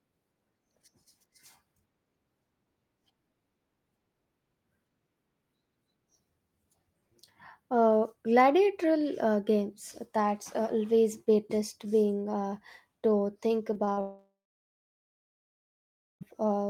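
Just after "being uh to think", three short concealed packet losses fall at 13.73 to 13.77 s, 13.85 to 13.89 s and 13.93 to 13.99 s. Each time, a small chunk of audio missed the decoder. It covered the gap by extending the last sound. The result is a quick smear or wobble.

At 14.01 s the sound turns into a fading buzz or hiss for about a third of a second. Silence then holds until 16.23 s, a gap of about 2.2 s. The likely cause is a long network dropout. The lost stretch never returns.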